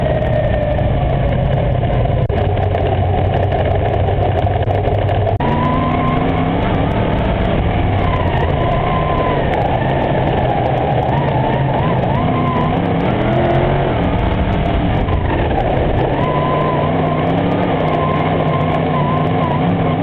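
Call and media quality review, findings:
No faults turned up on this one, nothing here that needs a ticket.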